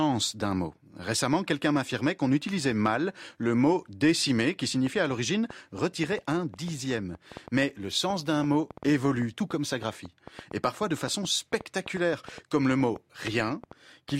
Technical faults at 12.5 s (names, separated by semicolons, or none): train of clicks